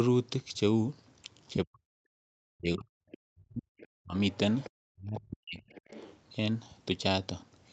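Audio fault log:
1.65–1.85, 2.43–4.16, 4.89–5.7 s, speech suppressed in double talk: the speech dips by up to about 40 dB, likely because the echo canceller ducked it while the far end spoke. The waveform shows sudden collapses and the spectrogram shows patchy gaps.
3.11–3.18, 3.78–3.87, 4.3–4.7, 5.59–6.15 s, other side's voice leaking through: a faint second voice about 20 to 25 dB below the speech, likely residual loudspeaker echo. It shows as weak harmonic traces on the spectrogram.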